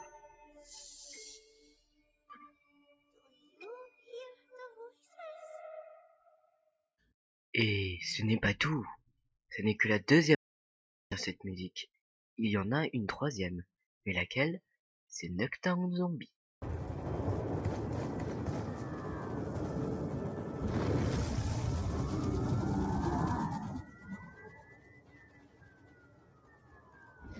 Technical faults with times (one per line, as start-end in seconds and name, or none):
0.00-27.39 noise suppressor applied to music or sounds
0.17-0.70 sound cut by the noise suppressor
1.40-3.61 sound cut by the noise suppressor
3.89-4.08 sound cut by the noise suppressor
4.35-4.53 sound cut by the noise suppressor
4.90-5.18 sound cut by the noise suppressor
6.06-6.89 sound cut by the noise suppressor
10.35-11.12 audio dropout to silence
23.54-27.39 sound cut by the noise suppressor